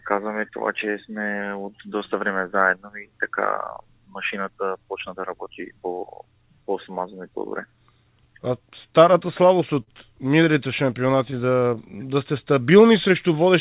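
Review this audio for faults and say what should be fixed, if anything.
Clock drift between sender and receiver runs through the whole clip. The sender's clock is slow by roughly 4 percent, so the jitter buffer keeps draining.

Repeated timing corrections run from 0.24 to 13.45 s. The receiver stretches the audio to 97 percent speed, adding about half a second and giving an unevenly dragging tempo.

Scattered short gaps fall between 8.04 and 9.89 s. About five late or lost packets, the longest near 50 ms, were patched by extending the previous sound, leaving brief smears.

Nothing is heard above 4 kHz, which fits a narrowband G.711 call path.

To prevent this, lock the sender's audio clock to a stable reference and fix the network loss or lateness behind those gaps.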